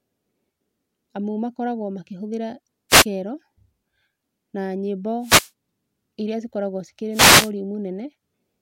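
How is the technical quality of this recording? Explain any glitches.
The recording has three short bursts of static breaking into the speech, each one a wireless microphone noise hit. They fall at 2.89 to 3.05 s, at 5.21 to 5.51 s right after "na nyĩmbo", and at 7.12 to 7.51 s right after "iria cikoragwo cikĩrĩ". Each burst is a quick swish of hiss lasting from about 0.16 s to about 0.39 s. These happen when the radio link from an analogue FM microphone momentarily fades as reflected signals cancel each other. The receiver's noise then rises. On a spectrogram each hit shows as a vertical band of broadband noise smeared across the frequency range. In the waveform it appears as a brief raised, fuzzy noise floor.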